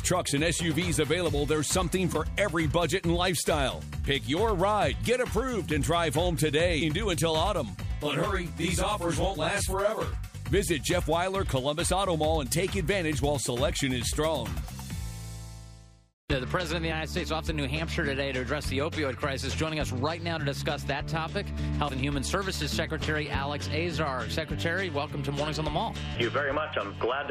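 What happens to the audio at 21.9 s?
At 21.88 to 21.90 s there is damaged data in the compressed stream: corrupted bytes make the decoder misread a frame and resync on the next header. It sounds like a brief chirp or blip, seen as a thin broadband vertical smear on the spectrogram and a jagged glitch in the waveform.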